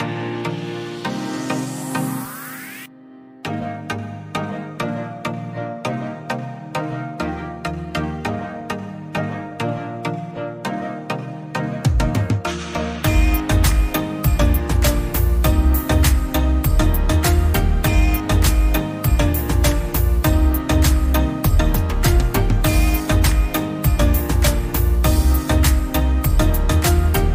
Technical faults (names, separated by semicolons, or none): none